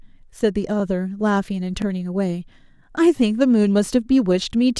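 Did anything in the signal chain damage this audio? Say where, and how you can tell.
Yes. Overlapping chunks in the buffering stage cause brief stutters in this speech at 0.80, 1.82, 2.84 and 3.86 s. The audio was handled in one-second chunks, each starting 20 ms before the previous one ended, so 20 ms replays at every join.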